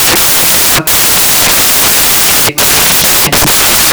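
A speech recording in which the samples are built from the wrong bytes for its entire length. The reader misassembles each sample, through a byte offset, swapped byte order or wrong alignment, so the rapidly changing low bits land in the high-order position. The result is loud, harsh broadband noise, close to white on the louder speech.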